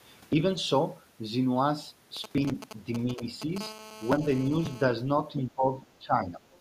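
A speech recording with several faults. The talker's level dips in short pieces at 0.30–0.36 s, 3.15–3.21 s and 4.19–4.23 s, by roughly 5 to 10 dB, and more deeply, by around 15 dB, at 5.32–5.68 s and 5.99–6.40 s. This pattern is speech suppressed in double talk, likely an echo canceller attenuating the near talker while the far side was speaking. From 2.17 s to 3.58 s there are GSM signalling bursts, a galloping dit-dit-dit of brief buzzes at the 217 Hz burst rate, roughly 10 dB below the speech. This is a nearby 2G phone transmitting intermittently, with its radio pulses rectified in the audio circuitry. At 3.61 s this gives way to continuous GSM phone buzz, lasting until 4.82 s. It is a hard, harmonic-rich 217 Hz rasp about 18 dB below the speech, the same interference from a phone now in a call and transmitting constantly. At 6.52–6.60 s a faint scrap of the other side's voice leaks through, at a very low level around 35 dB under the speech, likely where the echo canceller left residual loudspeaker pickup.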